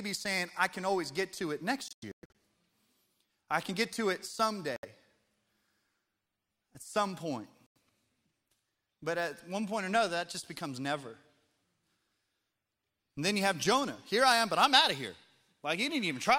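Speech with Bluetooth dropouts. After "always get to it", the sound breaks into silent holes from 1.88 to 2.31 s. The longest is about 0.12 s. Brief gaps follow at 4.76 s, after "can get to it", and 7.76 s, after "at some point". Speech resumes as if it had played on. Late wireless packets were likely dropped.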